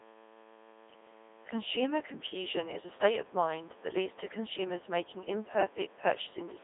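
A steady mains buzz runs under the whole recording, sitting around 20 dB below the speech. Sharp switching spikes on a 60 Hz supply are getting in, probably through a dimmer, rectifier or missing shield, and their harmonics climb high enough to give it that raspy edge.

Also throughout, the speech has gone through a Codec 2 vocoder, and it's heavily damaged. The sound fits a low-rate mode of about 2.4 kbit/s. Only pitch, voicing, energy and a rough spectral envelope survive, so the decoder rebuilds the voice from sine waves, leaving it robotic and buzzy. The band is squeezed to 300 Hz to 3.6 kHz, with nothing above that.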